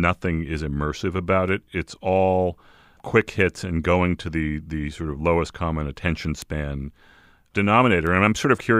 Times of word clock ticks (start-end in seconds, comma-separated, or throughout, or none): 0.66-8.07